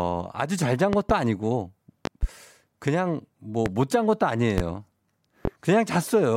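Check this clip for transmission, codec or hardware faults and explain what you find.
There's one fault here, a loud pop, five times: double pops at 0.93–1.13 s and 2.05–2.26 s, single ones at 3.66, 4.58 and 5.45 s. A voltage spike, likely from a plug, switch or static, lands well above the speech, which carries on underneath.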